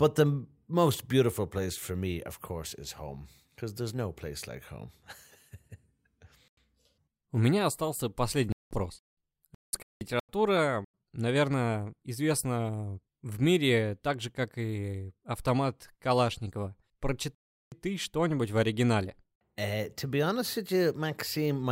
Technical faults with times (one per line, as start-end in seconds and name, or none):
6.48-6.57 corrupt frame muted
8.52-9.00 corrupt frame muted
9.55-10.29 corrupt frame muted
10.85-10.92 corrupt frame muted
17.35-17.72 corrupt frame muted
21.29-21.36 corrupt FLAC frame